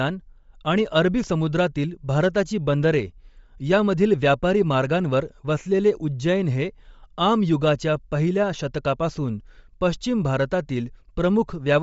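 Bluetooth LC3 compression runs through the whole clip. The speech stops dead at about 7.7 kHz, and its upper band has a plainly audible breathy, grainy edge. That is likely the LE Audio transform codec working at a low rate, which fits roughly 32 kbps with 10 ms frames. At that rate, much of the upper spectrum is zeroed and refilled with shaped noise. A granular texture sits over every phrase.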